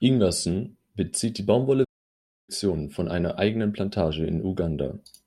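The player likely ran short of data or was blocked, so a playback stall from 1.84 to 2.49 s cuts the speech to silence for about 0.64 s.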